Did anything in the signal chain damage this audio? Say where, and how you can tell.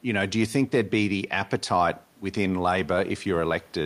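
No, nothing in the signal chain stood out as damaging this speech on listening.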